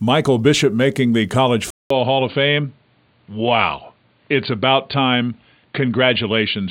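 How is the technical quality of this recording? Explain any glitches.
The quality drops partway through. At 1.70 s there's a 200 ms gap, then the speech goes dull and boxy with nothing above 4.6 kHz, a faint new noise floor, and about the same level. That's likely the input switched to a poorer device.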